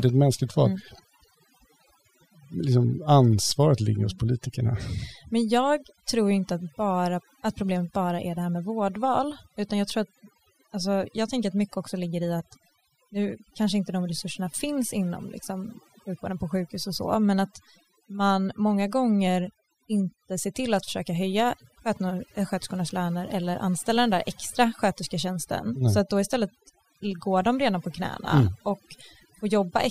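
Across the whole speech clip, overdone noise removal has pulled individual frequency bands down wherever they sat near the estimated noise floor, taking quiet speech detail with them. Unlike a noise gate, which mutes everything together, the background collapses into twinkling specks.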